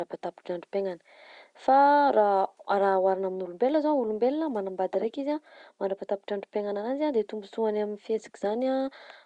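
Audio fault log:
No technical faults can be heard in this speech; the signal stays steady and intact, with only the room's background noise present, about 50 dB below the speech.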